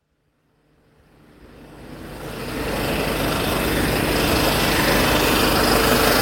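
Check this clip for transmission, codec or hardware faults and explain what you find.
No faults found.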